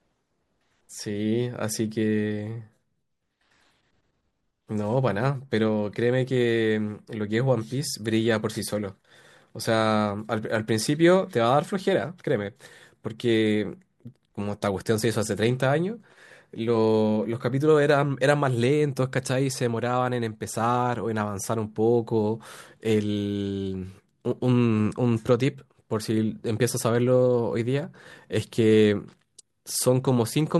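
Nothing here needs flagging; no technical faults turn up anywhere in this speech recording.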